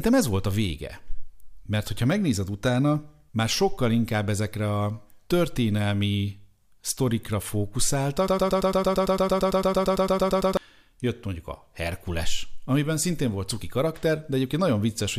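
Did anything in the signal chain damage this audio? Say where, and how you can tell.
Yes: from 8.28 to 10.57 s a 113 ms slice of speech repeats 20 times, a broken-record loop, likely a playback or stream stall replaying its last buffer.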